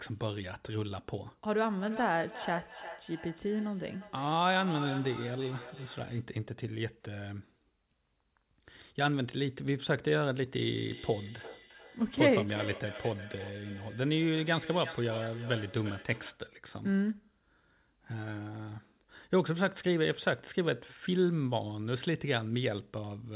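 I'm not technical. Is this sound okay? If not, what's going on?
No. From 1.65 to 6.32 s and again from 10.83 to 16.46 s there is feedback echo between two devices. Two devices on the same call sit near each other, so one microphone picks up the other's loudspeaker, and each word returns roughly every 0.4 seconds. The phone-style dullness, with nothing above 4 kHz, comes from the call's G.711 line and is not a fault.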